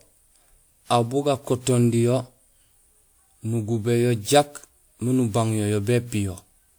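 Throughout the speech, the sound is swirly, smeared and hollow, with blurred attacks and nothing above 20.1 kHz. This is likely generation loss from about five lossy encoding passes, which fits a WMA 128 kbit/s chain, each pass adding fresh quantisation noise.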